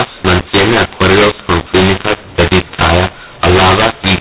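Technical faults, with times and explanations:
Throughout, mu-law and A-law mixed up: the telephone audio was encoded with the A-law curve but decoded as mu-law. Each 8-bit code maps to the wrong level, so some peaks are exaggerated and others are squashed, and the quietest samples are pushed well above silence. The speech sounds harsh and gritty, and the pauses fill with hiss. The band still stops at 4 kHz, which fits G.711's 8,000-samples-a-second rate.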